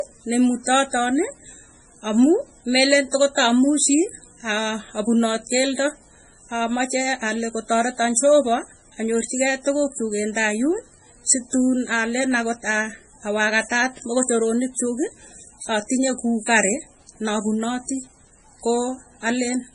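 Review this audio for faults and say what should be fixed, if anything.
All the way through, the speech sounds watery and swirly, with nothing above 10.5 kHz and metallic chirps on s sounds. That's likely heavy MP3 compression. The encoder starved for bits, cut the treble and let weak frequency lines flicker between frames, which fits a bitrate around 24 kbps. To prevent it, work from the original recording or a much higher-bitrate export.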